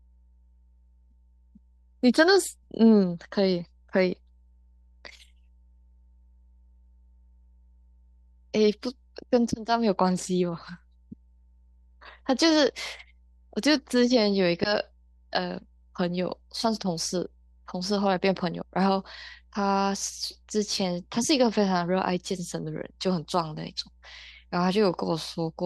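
The clip is speech with mains hum running under it from start to finish. A steady low tone sits at 60 Hz, roughly 35 dB below the speech. It points to a ground loop or a nearby transformer feeding the power line into the signal.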